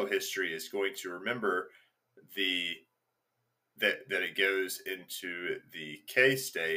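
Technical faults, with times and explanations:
5.14 s, dropped samples: there's one sharp click here, a single hairline tick that would show as a thin vertical line running up the whole spectrum. The likely cause is a sample or so going missing from the stream, so the waveform jumps straight from one value to a later one instead of moving smoothly. That's only a tiny fraction of a millisecond, far too short to take out any actual sound, but the sudden step reads as a click.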